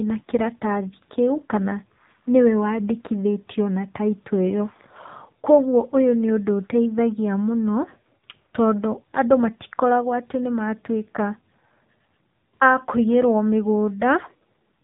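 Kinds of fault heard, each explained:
AMR narrowband mobile codec: the speech sounds boxed-in, plainly buzzy and synthetic, with nothing above 3.8 kHz. A mobile speech coder has rebuilt the voice from a vocal-tract model and a few pulses per frame, at a low rate pointing to about 7.4 kbps.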